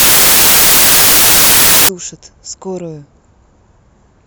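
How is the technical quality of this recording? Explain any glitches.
Rough at the start, then it settles. From 0.0 to 1.89 s the speech is buried under loud, harsh broadband noise. That's samples built from the wrong bytes: the reader is assembling each sample out of misaligned or swapped bytes, so the jittery low-order bits end up as the big part of the value. You get a wall of noise.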